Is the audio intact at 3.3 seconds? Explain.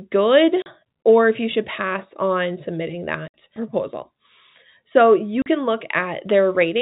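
No. Between 3.28 and 3.34 s the stream suffered packet loss filled with silence: a run of packets never arrived, and the receiver played 60 ms of digital silence in their place, which fits three lost 20 ms packets. Just after "should pass on submitting", the speech drops out abruptly, with a hard cut at each edge of the gap.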